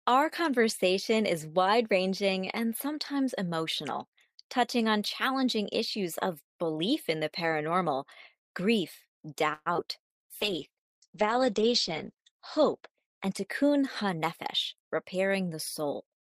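At 9.53 s the speech stops moving forward and the last sound is drawn out as a fading buzz or hiss until 9.68 s. This is a call audio freeze, likely from packets held up in transit that left the jitter buffer empty. About 124 ms of filler, including a brief silence, was inserted. The speech then resumes where it paused, adding delay without losing any of it.

Right after, at 9.74 s and again at 9.77 s, there are two short concealed packet losses. Each time, about 20 ms of audio never reached the decoder. The receiver extended the preceding sound and blended back in, which leaves a quick smear or wobble.

From 10.41 s to 14.05 s a call bitrate drop makes the speech rough and muffled. The encoder was pushed from 32 kbps down to 9 kbps and stayed at the lowest rate for about 2.1 s. Its bandwidth shrank from 20 kHz to 8 kHz, cutting the upper frequencies.

From 13.05 s to 14.91 s a jitter buffer speed-up overlaps the end of that. 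The buffer held more audio than it needed, so the receiver trimmed short pitch-period pieces, roughly 150 ms in total. The speech runs about 7% fast at unchanged pitch and sounds hurried.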